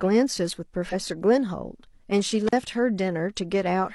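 It's a short speech clip with two separate glitches. At 0.89 to 0.94 s you get compressed frames skipped: the audio lurches forward by about 50 ms, which fits one dropped frame of roughly 46 ms that was either missing or rejected by the decoder as corrupt. Then at 2.47 to 2.53 s there's an intermittent contact: the signal drops out for about 40 ms, with crackle on both edges and faint hiss in between. That's the sound of a loose cable or plug opening up for a moment before reconnecting.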